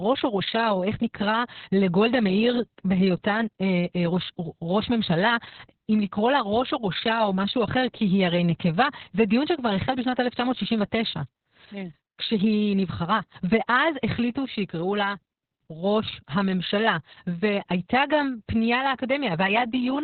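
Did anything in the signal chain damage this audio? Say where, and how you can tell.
Yes, at the codec stage, and it lasts the whole clip. It's Opus voice compression: nothing comes through above 4.3 kHz, so the speech sounds narrowband, muffled and hoarse, a bit robotic. That's the SILK coder roughing out the excitation, which fits a starved bitrate around 6 kbps.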